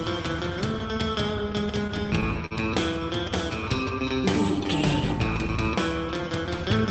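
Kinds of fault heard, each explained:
Short stall from a late packet: Around 2.46 to 2.53 s a packet didn't arrive in time, so the jitter buffer ran dry and the receiver stretched the last bit of sound for about 49 ms until it caught up. Nothing actually goes missing, but that moment hangs a touch too long with a slight buzz or dip, and everything after sits about 49 ms later, all within a call path whose top end stops near 8 kHz.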